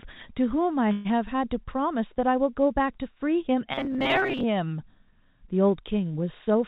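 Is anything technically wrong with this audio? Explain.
Yes, there are two faults in this speech clip, which has passed through a call path with G.711 A-law coding, so nothing appears above 4 kHz.

From 0.92 to 1.07 s there is a call audio freeze, likely caused by late packets draining the jitter buffer. The receiver stretched the last sound into a fading buzz or hiss for 128 ms. When the packets arrived, the speech resumed where it had stopped, with nothing lost but 128 ms of extra delay. On a spectrogram this shows as a smeared, decaying band with no new detail. In the waveform it is a smooth envelope that dies away.

From 3.72 to 4.43 s there is robotic sound from repeated short buffers. New audio was likely arriving too slowly, so the decoder kept looping a tiny slice, which fits a repeat of about 7.5 ms, and skipped around half the real signal. That loop imposes a fixed 134 Hz buzz, so the speech sounds metallic while loosely following the syllables. 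A spectrogram shows evenly spaced horizontal harmonics of 134 Hz, and the waveform shows an identical short cycle repeating.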